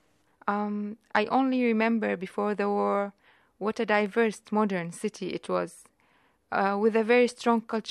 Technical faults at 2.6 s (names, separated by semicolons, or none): none